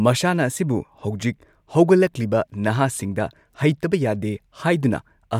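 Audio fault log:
No faults detected in this speech.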